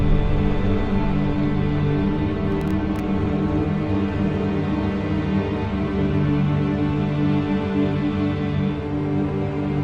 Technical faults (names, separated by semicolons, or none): processor overload crackle